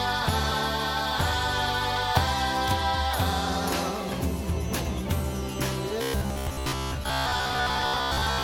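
Compressed frames skipped at 0.51 s, 2.15–2.18 s, 4.79–4.82 s and 7.03–7.08 s. The sound jumps ahead by roughly 0.1, 0.07, 0.15 and 0.1 s in turn, which points to a few 20 ms frames going missing. From 6.02 s to 8.43 s there's robotic sound, likely from repeated short buffers: a rigid 66.8 Hz metallic buzz from a roughly 15 ms chunk looping over most of that stretch.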